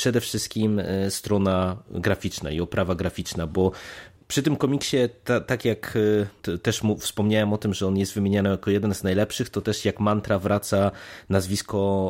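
From 0.56 to 1.27 s the speech runs about 5.4% fast and rises about 90 cents, then snaps back. Likely a drift correction step resynchronising clocks. Unlike wow, the shift is a single step, with speed and pitch moving together.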